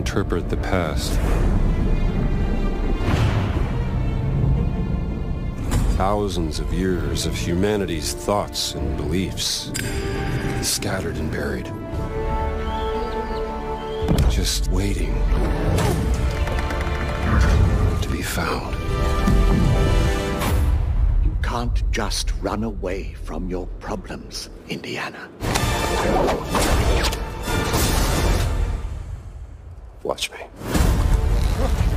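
From the first second to the end there's a gritty, inharmonic fizz riding on the sound. That's crude rate conversion: samples were simply dropped to the nearest one rather than filtered, which fits a 48 kHz to 44.1 kHz change. The dropping repeats in a fixed cycle, so the error forms shifted, inharmonic copies of the material, sitting only around 25 dB down. You'll notice it most on loud and bright passages.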